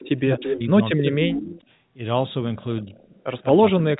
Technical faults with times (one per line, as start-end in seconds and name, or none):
0.00-0.09 echo leak
0.21-1.66 speech suppressed in double talk
0.41-0.55 echo leak
1.56-1.61 echo leak
2.79-3.07 echo leak
2.82-2.94 speech suppressed in double talk
3.51-4.00 speech suppressed in double talk